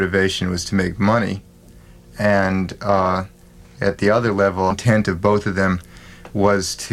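A stream segment skipped at about 4.70 to 4.74 s, most likely because one chunk of the segmented stream failed to load and playback moved straight on to the next chunk. The sound jumps abruptly forward at that point, with a brief blip marking the discontinuity.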